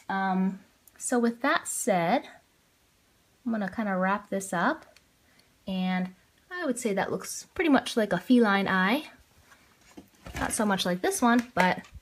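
No technical faults can be heard in this audio.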